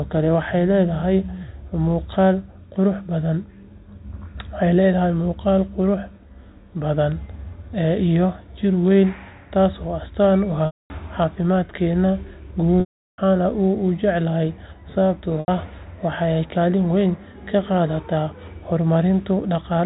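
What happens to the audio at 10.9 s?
Packet loss with pitch repetition from 10.66 to 10.90 s: 240 ms go missing, the last pitch period repeats and fades into silence, and the speech returns with a brief cross-fade.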